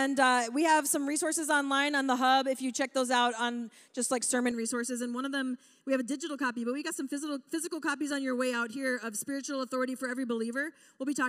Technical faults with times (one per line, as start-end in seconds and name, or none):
4.51-11.28 channel delay (comb filtering)